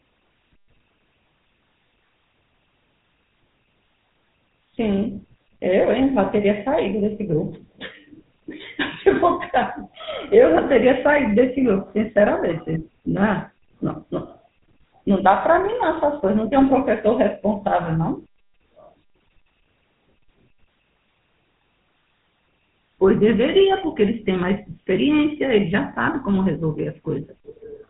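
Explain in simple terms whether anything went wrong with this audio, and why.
Throughout, the GSM full-rate codec makes the speech buzzy and gravelly, cutting everything above 3.8 kHz. A plain telephone filter would muffle it without that roughness.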